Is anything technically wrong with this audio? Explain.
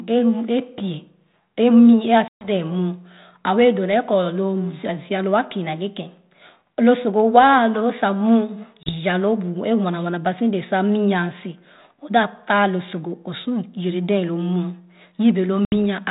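Yes. There is packet loss on an ADPCM call, three times. At 2.28 s, just after "a mii a", about 130 ms drops out. At 8.83 s about 30 ms goes, and at 15.65 s about 70 ms. Each gap is hard-edged silence. The G.726 decoder's predictor and step size lose track of the sender, so the speech returns with brief distortion.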